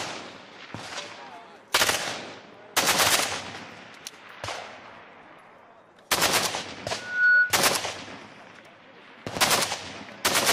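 Loudspeaker feedback squeal, 6.97 to 7.58 s: the mic catches its own speaker, so a 1.5 kHz tone swells over about 0.3 s to roughly 10 dB above the audio.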